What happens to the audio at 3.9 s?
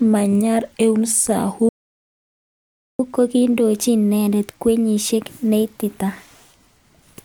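At 3.9 s you're in the middle of a catch-up at higher speed that runs from about 3.00 s to 6.00 s. The speech is playing at 1.1 times normal rate, and because the player gets there by resampling rather than time-stretching, the pitch rises with it, by roughly a semitone and a half. That's the player working through its backlog after a stall to win back lost time. Then it drops back to normal speed and pitch.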